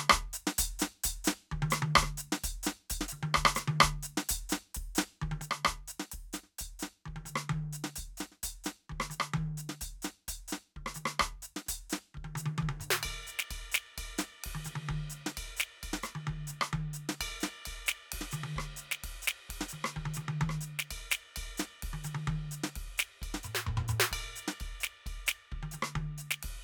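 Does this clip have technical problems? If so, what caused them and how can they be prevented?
Yes. At 5.42 s the music drops abruptly by about 6 dB and stays lower until the end. This is likely one channel drops out: losing one stereo channel leaves the mono sum with only half of the shared material. The waveform shows a clean step down in amplitude, and the spectrogram darkens evenly across all frequencies from that point. Securing connections and metering each channel before summing prevents it.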